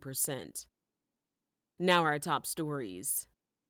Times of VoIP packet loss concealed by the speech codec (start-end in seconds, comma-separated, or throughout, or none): none